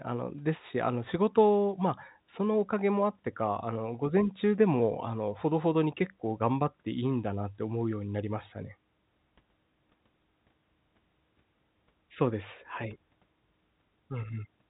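Speech, with no technical faults to report here.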